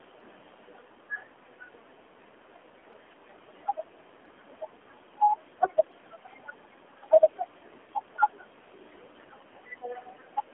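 AMR narrowband mobile codec damage runs throughout. Speech is squeezed into a 200 Hz to 3.4 kHz telephone band, and the pulse-driven vocal-tract model rebuilds each frame coarsely, giving a plainly buzzy, synthetic tone that fits a low bitrate near 7.4 kbps.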